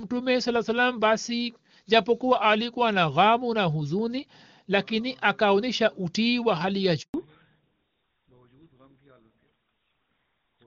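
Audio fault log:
7.02–7.14 s, handover gap: right after "utii wa hali ya" the speech fades within a few tens of milliseconds and stays silent for 120 ms while the call switches networks, because no speech frames arrive during the switch, so anything said in that gap is lost.
7.14–10.66 s, fallback to narrowband: after the gap the call leaves HD Voice, which sounds clear at a rate consistent with 23.85 kbit/s AMR-WB, for GSM full-rate coding at 13 kbit/s. Nothing remains above 4 kHz, so the speech sounds duller and rougher until the end.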